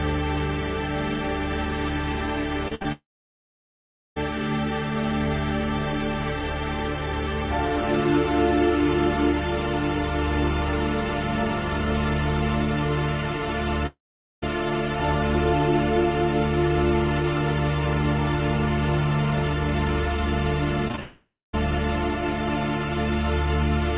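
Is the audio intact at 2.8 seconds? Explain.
No. Repeated packet loss (robotic sound) runs from 2.68 to 2.86 s. Three packet gaps, the longest 58 ms, are each patched by stretching the preceding sound, so over half that span is concealed, giving a choppy stutter within the call path's 4 kHz band.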